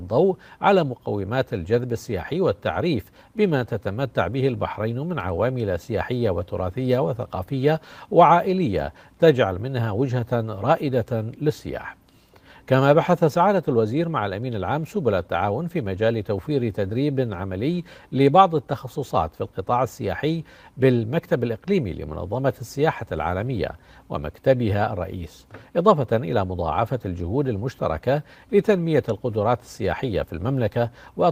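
No technical faults can be heard anywhere in this audio. Nothing in it calls for a timestamp or a cause, and no fix is needed.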